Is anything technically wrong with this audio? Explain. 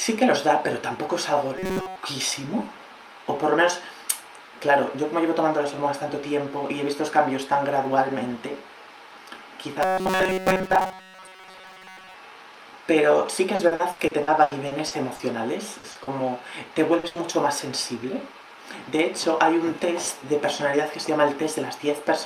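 Yes, the audio has four kinds of dropout and concealment fault, clustered mostly in the second half.

From 1.58 to 1.96 s and again from 9.83 to 12.14 s there is robotic sound from repeated short buffers. The sound turns into a rigid, metallic buzz pitched at 188 Hz. The likely cause is a playback path starved of new data, looping a fragment of roughly 5.3 ms in place of most of the incoming audio. On a spectrogram this appears as evenly spaced horizontal harmonic lines at multiples of 188 Hz. The waveform shows a short cycle stamped out over and over.

From 13.55 to 15.22 s there is repeated packet loss that also gives a robotic sound. Ten gaps totalling 480 ms, the longest 80 ms, were patched by extending the preceding sound, so about 29% of that span is synthetic. Each patch is followed quickly by another, so the sound comes out choppy and mechanical, with pieces missing. A spectrogram shows smeared, frozen blocks interrupting the normal detail. 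The waveform shows stretches of suspiciously periodic, slowly fading signal.

Short concealed packet loss occurs at 15.79, 15.91, 16.03 and 16.99 s, each a 40 ms hole. The decoder bridged each one by continuing the last pitch or noise and then crossfading back into the real audio. Each hole is heard as a brief smear or wobble, and a short consonant-like event may vanish. On a spectrogram each shows as a thin vertical band of blurred, stationary texture.

A burst of packet loss runs from 17.07 to 17.18 s, leaving 80 ms missing. The receiver held the last sound and let it decay, giving a brief held buzz or fading hiss before the audio resumes further along, with the content in between gone. The waveform shows a tapering envelope. On the spectrogram there is a frozen patch followed by an abrupt change in content.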